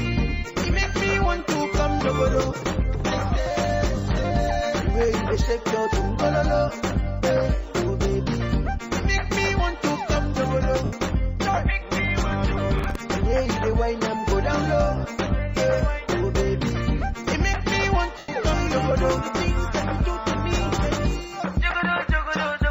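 At 10.85 to 10.93 s (75 ms) and again at 18.18 to 18.29 s (105 ms), lost LE Audio frames leave a noisy smear where the decoder keeps repeating the last spectrum with scrambled signs. The lengths fit runs of 7.5 ms LC3 frames. On a spectrogram, harmonics blur into diffuse noise that thins toward the end of each gap.

From 12.78 to 13.01 s, processor overload crackle adds a gritty tearing as about ten very short buffers, roughly 1.5 ms each, miss their deadlines and replay stale audio. The waveform shows hard-edged discontinuities, and the spectrogram shows vertical broadband streaks.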